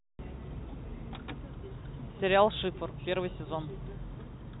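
No technical faults can be heard anywhere in the speech. It carries the narrow band of G.711 telephone coding, with nothing above about 3.9 kHz and only a faint trace, if any, of the coding's low-level noise riding under the speech.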